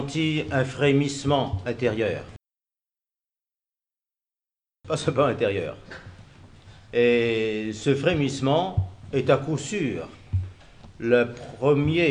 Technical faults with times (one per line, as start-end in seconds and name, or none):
none